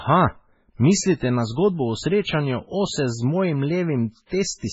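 A speech clip with heavy low-bitrate damage throughout. Nothing is present above 7.7 kHz, so the treble is sharply cut off. Weak spectral detail flickers in and out from frame to frame, giving the voice a watery, swirling texture with metallic chirps on sibilants and smeared consonant onsets. The likely cause is MP3 compression at a very low bitrate, something near 16 kbps, where the encoder runs short of bits, drops the top band and zeroes quieter frequency lines. Pre-echo appears three times: at 1.20 s, then from 4.14 to 4.17 s right after "srečanju ose z mojim", and from 4.26 to 4.31 s. Each time a short hiss of roughly 17, 34 and 54 ms leads into a sharp attack, which sounds softened. The codec spreads quantisation noise across a whole transform block, so noise sized for the loud onset leaks into the quiet moment before it.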